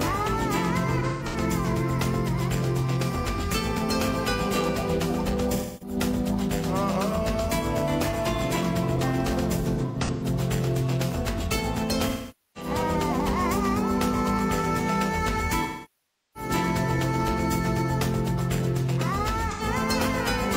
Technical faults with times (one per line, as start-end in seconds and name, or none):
0.99-1.36 AAC frame loss with concealment
5.55-5.97 AAC frame loss with concealment
9.61-10.24 AAC frame loss with concealment
12.08-12.71 AAC frame loss with concealment
15.62-16.50 AAC frame loss with concealment
19.51-19.62 AAC frame loss with concealment